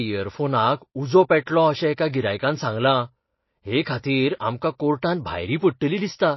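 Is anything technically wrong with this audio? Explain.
Yes. Throughout the speech, heavy MP3 compression has likely starved the encoder of bits, which fits a very low bitrate of around 24 kbps. To cope, the encoder has dropped everything above 5.8 kHz and discarded weaker frequency components, letting them flicker in and out between frames. The result is plainly audible: the voice sounds dull and muffled, with a watery, swirling texture, metallic chirps on s sounds, and softened, smeared onsets.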